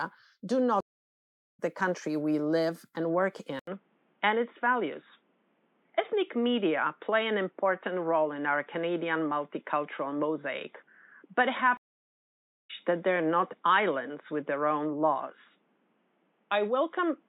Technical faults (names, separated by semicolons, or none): stream reconnect; input switched to a poorer device